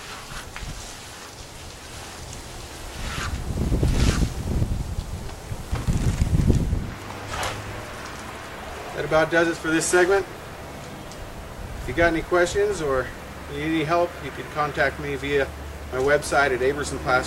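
From 1.93 to 4.63 s a doubled audio track appears: a full-band copy trails the original by about one second at roughly equal level, likely from a second, slower capture path. It starts and stops abruptly, with no decay, and a spectrogram shows the same patterns repeated a second later.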